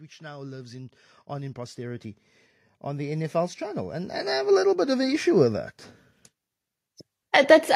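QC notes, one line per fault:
0.19–2.08 s and 2.96–5.67 s, automatic gain rising: the level control judged the input too quiet and gradually raised its gain, by about 7 dB over the first span and about 12 dB over the second. Because the gain acts on everything, speech and background noise swell together. On the waveform the envelope widens steadily across each span, and on a spectrogram every band, including the noise floor between syllables, brightens in step.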